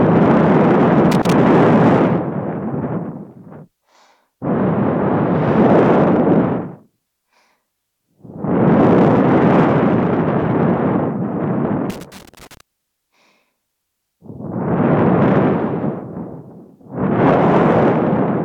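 Loose connector crackle bursts out at 1.12 to 1.33 s, then 11.90 to 12.61 s. A worn contact breaks intermittently, chopping the signal into irregular scratchy pops.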